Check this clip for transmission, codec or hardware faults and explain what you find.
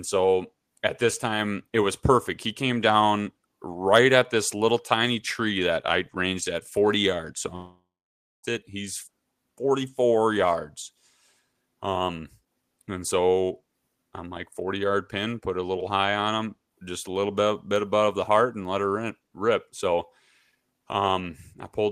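One fault. From 7.55 to 8.45 s the speech trails into a fading buzz or hiss, then silence: likely a long network dropout, the receiver masking 0.88 s of lost audio.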